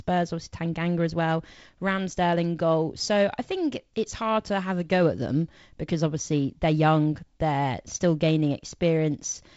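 No technical faults are present in this speech recording, which has the wideband telephone sound of G.722 coding at 48 kbit/s, with a faint coding grain and no content above about 7.7 kHz.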